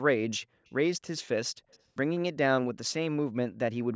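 Speech with brief echo leak at 0.65–0.71 s and 1.71–1.79 s: faint copies trailing the voice by 181 ms, very quiet, likely an incompletely cancelled loudspeaker echo on one side of the call.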